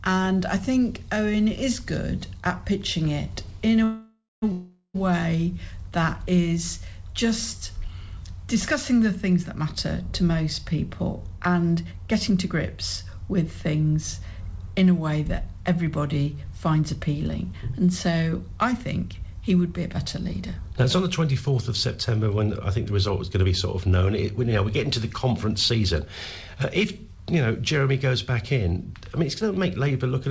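Call audio freeze hits twice in this call audio, from 3.84 to 4.44 s and from 4.52 to 4.96 s. The last sound is stretched into a fading buzz or hiss that drops to near-silence for about 160 ms in the first stall and 30 ms in the second. The likely cause is delayed packets draining the jitter buffer. Playback then resumes where it stopped, adding 0.58 s and 0.42 s of delay without losing content. A jitter buffer slow-down follows from 5.57 to 6.42 s. The receiver repeats single pitch periods or slices of pause to rebuild its reserve, adding 38 ms and running at 96% speed with unchanged pitch, so sounds drag slightly. Jitter buffer speed-ups then occur at 11.29 to 13.30 s (105%), 16.67 to 19.24 s (106%), 21.86 to 23.66 s (109%), 25.48 to 26.06 s (105%) and 29.13 to 30.27 s (107%). Each trims short pitch-period pieces to shed excess buffered delay, removing roughly 40 to 150 ms per stretch, so the audio sounds hurried at the same pitch. 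The band stops at 8 kHz, which fits a wideband call codec such as G.722 on the call path.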